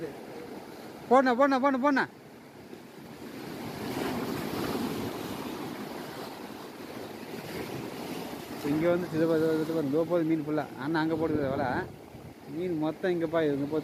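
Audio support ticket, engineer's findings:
No audible defects found; signal path shows no dropouts, distortion, level anomalies or timing irregularities at any point in the clip.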